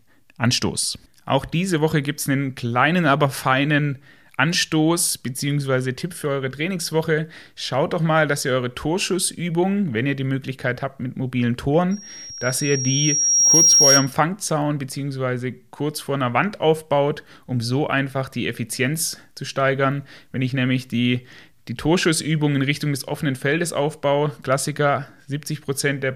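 Loudspeaker feedback squeal from 11.91 to 14.13 s, after "habt mit mobilen": a 5.6 kHz loop tone swells over roughly 1.5 s, peaking about 10 dB above the speech.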